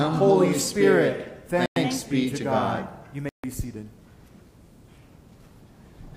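At 1.66 s the sound cuts to silence for about 104 ms, returning at 1.76 s; a second, longer gap follows at 3.29 s, lasting about 146 ms until 3.44 s. Both read as a likely Bluetooth stall: radio interference delayed packets, the receiving buffer emptied, and playback halted until retransmitted data arrived. Each dropout is abrupt, with clean silence rather than noise.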